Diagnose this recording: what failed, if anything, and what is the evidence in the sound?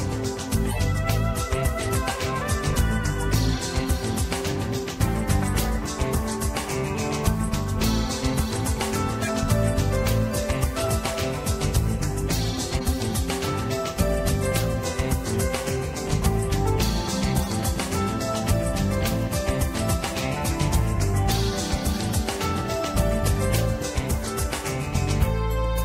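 The codec stage failed: corrupt frames were decoded, with damaged bits misread as wrong gains and codes in two or three frames each time. Short chirpy noise bursts, peaking around -15 to -20 dBFS, appear at 0.69–0.80, 9.21–9.30, 10.80–10.87, 12.72–12.82, 16.09–16.15 and 17.38–17.48 s.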